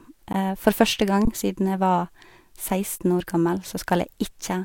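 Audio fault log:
0.33 s, 1.25–1.27 s and 2.98–3.00 s: underrun with held sample. The sound freezes briefly three times, for about 15 ms, then 21 ms twice. The later two come just before "siden jeg var" and "år gammel". The output buffer ran dry, and the converter held its last value, so the waveform sits flat. The 21 ms gaps fit a 1024-sample buffer. Nothing seems lost, and playback picks up where it paused, so each stop ends with only a soft edge rather than a sharp click.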